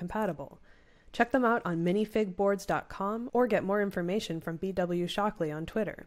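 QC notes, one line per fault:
1.15–2.48 s, Bluetooth SBC bit pool drop: the speech turns dull and gritty, losing its treble while a rough noise rides underneath. The link likely congested, forcing a lower bit pool (the sound fits a fall to around 99 kbps), starving the upper sub-bands and coarsening the rest.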